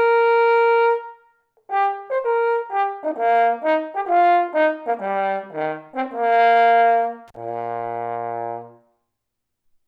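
At 7.28 s an intermittent contact breaks the sound until 7.37 s. A loose plug or cable connection opens for about 39 ms. The audio drops out with crackle at each edge. Faint hiss fills the brief gap while the line is open.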